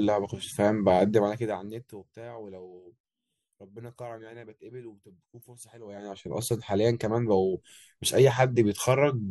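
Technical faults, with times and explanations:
1.06–2.16 s, zipper noise: the gain drops by about 20 dB, applied in coarse jumps at around a hundred per second with no smoothing between them. Each jump leaves a tiny click, and the clicks run together into a fast ticking buzz riding on the speech as it fades down.
5.81–6.27 s, zipper noise: the level comes back up by about 20 dB in the same stepped way, again around a hundred steps per second, squeezed into under half a second, giving a brief zipping rasp as the sound rises.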